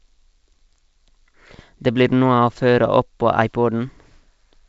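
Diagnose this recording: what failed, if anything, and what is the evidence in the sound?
Nothing has failed here, and no stage of the chain shows any sign of trouble. The speech carries the G.722 wideband telephone coding at 64 kbit/s, whose traces in the sound are faint at most.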